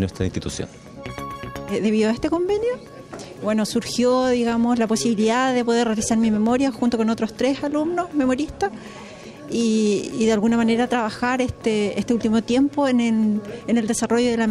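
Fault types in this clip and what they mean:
No faults can be heard anywhere in this audio.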